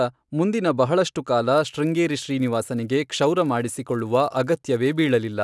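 Speech, with a resampler restarted on every block from 1.53 s to the end: a 100 Hz buzz from 10 ms block-edge errors, fitting a 48 kHz to 24 kHz conversion, present only with signal, unlike mains hum.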